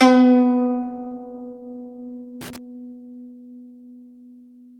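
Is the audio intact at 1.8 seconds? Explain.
Yes, at 1.8 seconds the music plays through intact, with no dropout, click, distortion or other fault at that point.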